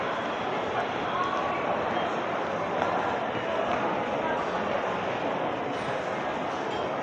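No technical faults can be heard anywhere in this recording of sounds. Nothing in it calls for a time stamp or a repair.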